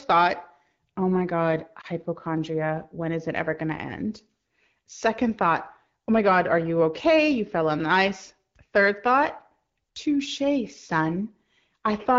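A speech recording with a brief dip or warble in the voice from about 1.81 to 1.86 s, where the sound thins for an instant and then returns a little rough before settling. That is a lost AMR speech frame: a single 20 ms frame was dropped, likely through radio errors failing its checksum, so the decoder filled the gap by repeating the previous pitch and vocal tract settings at reduced gain. The surrounding wideband AMR (HD Voice) coding shows only light codec texture, which fits a rate of about 12.65 kbit/s.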